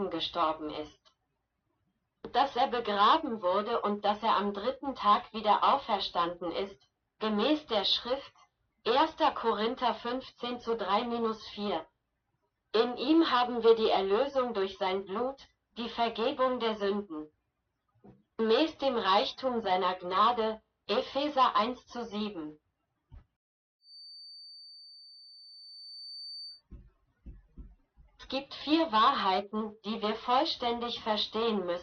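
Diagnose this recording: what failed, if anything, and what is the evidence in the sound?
A feedback whistle holds at 4.6 kHz, 23.78 to 26.63 s, about 20 dB down. Playback likely leaks into the microphone. The loop sits near instability.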